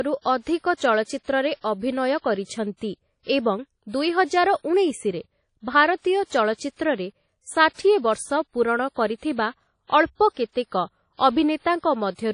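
WMA compression runs throughout the speech clip. The audio rings and sounds washy, with a hiss that swells and fades with the signal, and nothing is heard above 10.1 kHz, likely from a WMA encoder whose sound fits a bitrate near 32 kbps.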